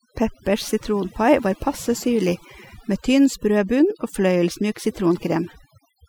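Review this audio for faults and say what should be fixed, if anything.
Overdone noise removal runs through the whole speech clip. The background drops. Twinkling specks flicker in the gaps. A noise reduction stage was pushed too hard. It cuts individual frequency bands whenever they sit close to its noise estimate. Quiet parts of the voice fall under that estimate, so they are removed along with the noise. To prevent it, use a gentler reduction setting on the original noisy recording.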